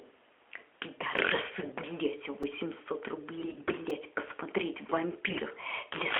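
A speech clip carried over a narrowband mobile codec, with the top end stopping below 4 kHz. There are two kinds of trouble. First, a repeated buffer at 1.18 s, 2.43 s and 3.90 s: new audio arrived late, so the device replayed its last tiny block once, twice, then three times. Each one comes across as a quick click or buzz, which fits a 128-sample buffer of about 2.67 ms. Second, AMR bit errors at 1.60–1.74 s, 3.38–3.75 s and 5.28–5.42 s: flipped bits in the less-protected parts of the frames scramble the excitation pulses and fine parameters, so the voice keeps its pitch and level but goes hoarse, scratchy and gargly for those stretches.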